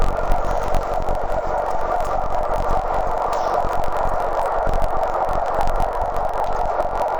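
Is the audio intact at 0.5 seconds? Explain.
No. At 0.5 s, as throughout, the sound is interleaved audio read as planar: each 21.33 ms block, which fits 1024 samples, is split into halves played as separate channels at half speed. It sounds an octave low, doubled and choppy at 46.9 Hz.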